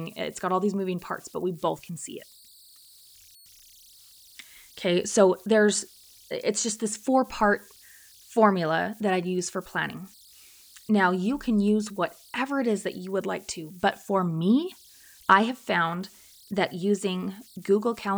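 A faint tone near 4 kHz runs from start to finish, about 31 dB below the speech, heard as whistles, chirps or hiss in the pauses and as grainy noise under the speech. These are converter idle tones: an undithered delta-sigma converter locks into repeating bit patterns on small inputs, and those patterns come out as a tone.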